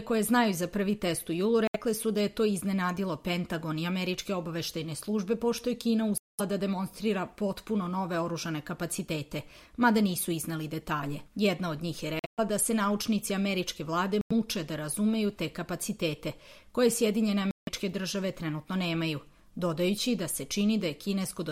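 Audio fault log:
1.67 s, 6.18 s, 12.19 s, 14.21 s, 17.51 s: Bluetooth dropouts, likely from packets missing the headphones' deadline. The sound cuts to silence for 70 to 210 ms, then resumes further on, as if it had kept playing. The 12.19 s gap is broken, spread over 186 ms.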